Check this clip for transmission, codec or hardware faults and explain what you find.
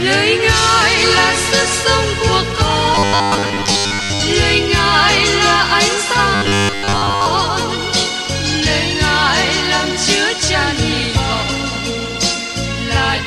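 Two passages show a robotic sound from repeated short buffers, at 2.95 to 4.22 s and again at 6.35 to 7.26 s. Both times the audio turns into a rigid, metallic 100 Hz buzz that tracks the original only loosely. The likely cause is new audio arriving too seldom, so the software keeps replaying the last 10 ms or so while most of the real audio in between is skipped. Those repeats set the fixed 100 Hz rate.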